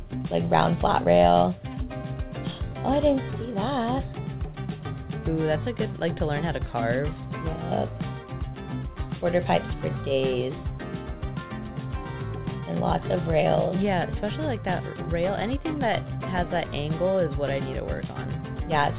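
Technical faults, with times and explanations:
No technical faults found; the audio comes through a narrowband call path that leaves nothing above 4 kHz, which fits G.711 mu-law at 64 kbps.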